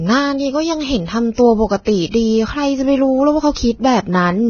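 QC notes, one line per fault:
Throughout: Vorbis compression. The sound is hissy and grainy, with roughened tones, blurred attacks, and nothing above 6.5 kHz. This is likely Vorbis coding at heavy damage. The upper band has been cut away, and the remaining treble detail is quantised so coarsely that it turns into noise of similar energy. That matches a very low bitrate, around 17 kbps.
1.33–1.38 s, 1.85–1.87 s, 2.11–2.14 s, 3.54–3.56 s: pre-echo. Before each of these sharp speech onsets there is a short hiss lasting 46, 22, 32 and 22 ms respectively, and the attack itself sounds softened and smeared. Each onset lands late in a transform block. The codec spreads its quantisation noise, sized for the loud attack, across the entire block, so the noise fills the quiet gap just before the attack.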